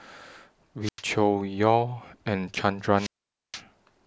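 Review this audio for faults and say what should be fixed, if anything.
Wireless microphone squelch dropout at 0.83–1.02 s and 2.96–3.61 s: the radio signal fades, hiss rises, then the receiver's squelch mutes the speech for about 95 ms and 474 ms. To prevent it, keep the transmitter in clear line of sight of well-placed receiver antennas, use diversity reception, and check fresh batteries and a clean frequency.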